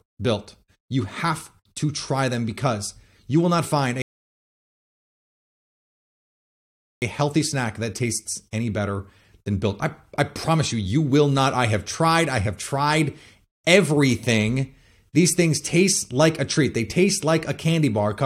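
At 4.02 s the speech stops dead for 3 seconds, a rebuffering stall. Playback ran out of downloaded audio, waited, then resumed exactly where it left off at 7.02 s.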